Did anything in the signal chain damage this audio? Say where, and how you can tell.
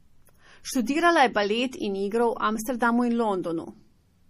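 Yes. The damage sits at the codec stage, most likely MP3 compression, and it runs through the whole speech clip. There is no content above 15 kHz, a hard ceiling typical of an encoder discarding treble to save bits. The plainly audible watery, swirling texture and metallic chirping on s sounds come from weak frequency lines being zeroed and reappearing from frame to frame. That degree of starvation fits a bitrate of around 40 kbps.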